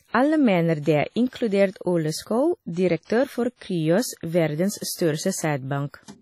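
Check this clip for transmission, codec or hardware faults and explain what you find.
The speech has two faults: heavy transform-codec damage throughout, and three pre-echo smears before sharp onsets.

Throughout, the sound is washy and ringing, with hiss that swells and fades with the speech and nothing above 15.1 kHz. This is likely WMA compression at a low bitrate around 32 kbps. On a spectrogram, the top is cut flat and quiet partials drop out in patches.

Pre-echo occurs at 2.23 s, 3.05 s and 4.77 s. A short hiss arrives about 36, 50 and 41 ms before each attack, so the onsets sound soft. Block-wide quantisation noise leaks backward into the silence ahead of each attack, showing as a low grey smear on the waveform or spectrogram.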